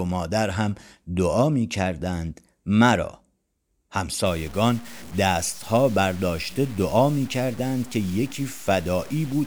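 From 4.26 s to the end, likely truncation to 6 bits without dither (low bit depth) leaves grainy distortion tracking the speech, roughly 25 dB down, gritty in quiet passages.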